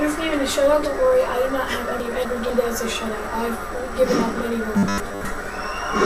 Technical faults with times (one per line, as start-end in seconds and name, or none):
2.00-2.50 chunks out of order
4.75-5.25 chunks out of order
5.08 robotic sound from repeated short buffers